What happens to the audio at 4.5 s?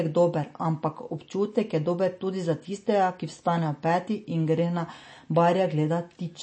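At 4.5 s the speech sounds watery and swirly with dull, clipped treble, as it does throughout: likely MP3 compression, cutting everything above 8.4 kHz, consistent with a bitrate near 32 kbps.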